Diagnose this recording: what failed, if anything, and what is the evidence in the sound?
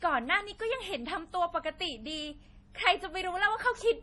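The codec stage failed: heavy MP3 compression runs through the whole speech clip, likely from an encode starved of bits, consistent with about 32 kbps. Nothing remains above 11.5 kHz, and weak frequency lines flicker between frames, leaving a watery, swirly texture and smeared attacks.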